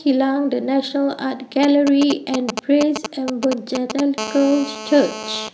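From 1.63 to 4.0 s, GSM signalling bursts: a nearby 2G phone exchanging short radio bursts gets rectified by the audio circuit, producing a galloping dit-dit-dit of brief 217 Hz buzzes only slightly quieter than the speech. From 4.18 to 5.49 s, GSM phone buzz: the phone, now in a call, transmits in bursts 217 times a second, leaving a steady, raspy, harmonic-rich buzz about 11 dB below the speech.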